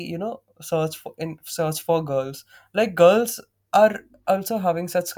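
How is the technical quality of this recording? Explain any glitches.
The recorded speech signal holds steady throughout, with no glitches or technical faults to point to.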